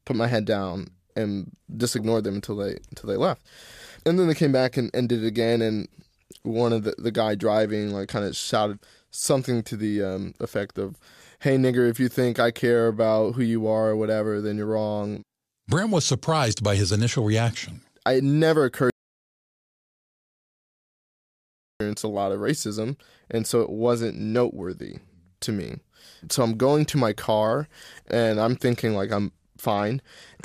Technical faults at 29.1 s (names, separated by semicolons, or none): Bluetooth SBC bit pool drop